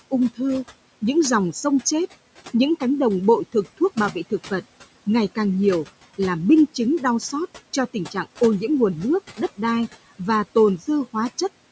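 Speech recorded through a call microphone chain, with noise suppressor artifacts running throughout. The suppressor pulls steady room noise down by about 17 dB, so the background sinks between phrases and swells under speech. On a spectrogram the noise floor turns patchy and speckled, dark gaps alternating with flickering bands. The room noise sits about 19 dB below the speech, and the call processing shows as an empty region above 8 kHz.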